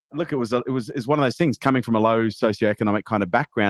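No technical faults turn up anywhere in this speech clip. It has clearly passed through a WebRTC call path: the top end stops at around 12 kHz, with the coding texture you'd expect from Opus at a rate near 24 kbps.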